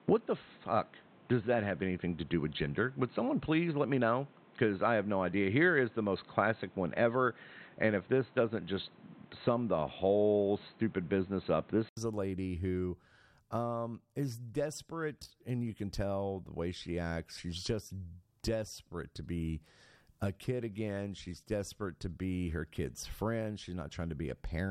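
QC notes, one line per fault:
0.00–11.97 s, input switched to a poorer device: speech sounds dull and boxy, with nothing above 4.2 kHz and a noise floor roughly 30 dB down. An 80 ms gap, a level shift of around 5 dB, and full bandwidth follow, likely from a narrower-band microphone or headset profile.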